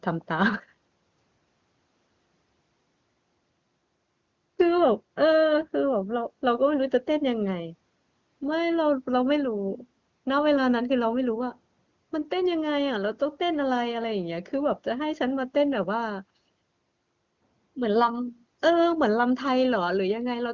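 No technical faults can be heard in the speech. It carries the narrow top end of call audio, with nothing above about 8 kHz, and any coding traces are faint at most, which fits AMR wideband running at one of its highest rates.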